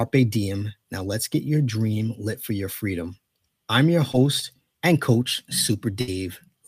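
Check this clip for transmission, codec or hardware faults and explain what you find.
Two transmission faults are present, both from lost packets on the call path.

At 4.11 to 4.15 s, just after "your freedom I'm your", there is short concealed packet loss. About 20 ms of audio failed to arrive, and the decoder bridged it by extending the preceding sound before rejoining the real signal. It comes through as a quick smear or wobble. Unlike a burst, it is too short to fade.

At 6.01 to 6.09 s, right after "and coach", there is a burst of packet loss. Roughly 60 ms went missing in a run, and the receiver stretched the last sound while lowering its level. This produces a held buzz or fading hiss, and when the speech resumes, a stretch has been skipped. That audible gap and fade set it apart from the brief concealed dropout earlier.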